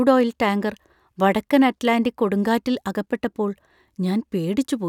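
Listening through the speech recording, nothing stood out as a technical problem at any point.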